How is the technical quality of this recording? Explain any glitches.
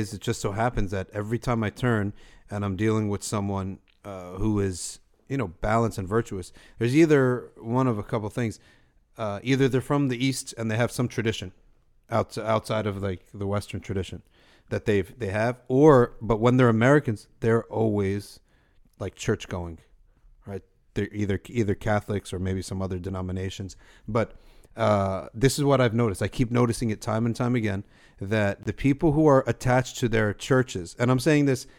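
One glitch stands out in this speech recording. At 28.63 to 28.67 s, a corrupt frame muted event leaves an abrupt 36 ms hole of pure silence, consistent with one damaged compressed frame that the decoder rejected and the player blanked. Unlike a buffer dropout, timing stays intact, and unlike concealment, nothing fills the gap.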